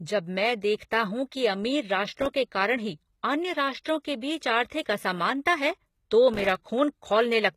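Throughout the speech, the treble sounds rebuilt rather than recorded. Above the crossover it does not line up with the harmonics below, and nothing reaches past 14.9 kHz. The codec damage is plainly audible. The likely cause is HE-AAC compression at a low bitrate, around 20 kbps. Only the lower spectrum is really coded. The top is synthesised by spectral band replication, which copies lower bands upward and shapes them with a coarse envelope.

From 2.13 to 2.31 s, right after "कि अमीर" and before "के कारण ही अन्य", a burst of crackle tears through the audio. It comes back from 6.34 to 6.72 s, after "आर्थिक असमानता है तो", and this second burst lasts about twice as long. Each burst is processor overload crackle. The processor kept missing its deadlines for small audio buffers, on the order of 3 ms each, and every missed buffer left a tiny hard-edged silent gap. About 20 and 30 of these gaps in quick succession fuse into the gritty crackle, which stops once the load passes.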